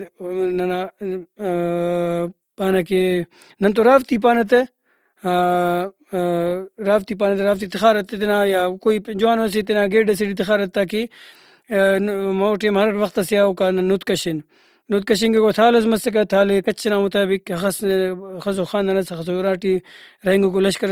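Throughout, the speech likely went through Opus compression at a rate that sounds near 24 kbps, so its tones turn plainly rough, grainy and noisy.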